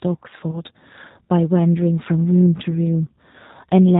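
Speech clip coded throughout with the G.729 codec, and the damage is plainly audible. The sound is band-limited with nothing above 4 kHz, and it has the slightly rough, synthetic texture of a low-rate model-based coder that fits 8 kbit/s G.729A, where the voice is rebuilt from a vocal tract filter and a pitch predictor plus a few pulses per frame. There are two short dropouts from VoIP packet loss concealed by the speech codec, at 0.51 to 0.61 s and at 2.71 to 2.73 s. The first is consistent with about 20 ms of audio going missing and the second with about 10 ms. Each time, the decoder extends its last pitch and filter state into a buzzy tone or coloured noise that fades. Because each frame depends on the one before, the voice stays weak or distorted for a short while after the gap.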